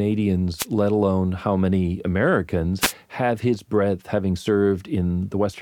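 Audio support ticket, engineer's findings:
Short swishes of static over the speech, 0.57–0.66 s (just before "let alone how many") and 2.80–2.93 s (just before "have his breadth having"). Wireless microphone noise hit: FM radio link fading as reflections cancel, receiver noise briefly rising over the signal.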